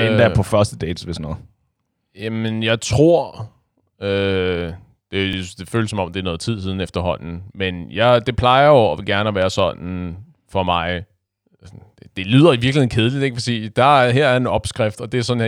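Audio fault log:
5.33–5.38 s and 11.38–11.43 s: overlapping chunks. Each 6 s chunk starts 48 ms before the last ended. That 48 ms slice plays twice. It sounds like a brief stutter just before "det føles som om" and just after "være sådan for mig".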